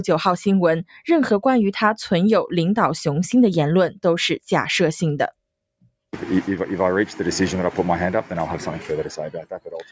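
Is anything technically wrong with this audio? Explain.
Yes. Throughout, a speech noise suppressor works on non-speech sound, treating steady parts as noise. Gain swings around 5 dB, so the waveform envelope pumps and sustained spectrogram bands flicker.

From 9.43 s to the end, the suppressor cuts this sound as noise, dropping it by up to about 21 dB for roughly 400 ms in total. The waveform shrinks and the spectrogram thins.

The call microphone processing leaves nothing above 8 kHz, a flat ceiling on the spectrogram that is expected and not a fault.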